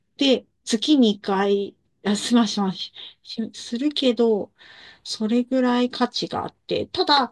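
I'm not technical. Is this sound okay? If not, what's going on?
Yes, nothing in this speech recording points to a technical problem with the signal.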